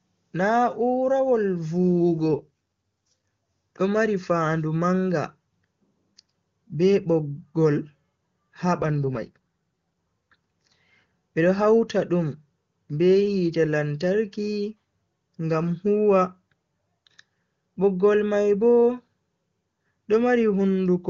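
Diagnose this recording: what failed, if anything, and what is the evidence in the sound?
The fault is an AMR rate drop at the network stage. Speech turns rough and synthetic from 2.31 to 3.28 s and from 8.82 to 9.37 s, with no lost band or gap. This fits the link pushing AMR-WB from 23.85 to 8.85 kbit/s to protect against errors.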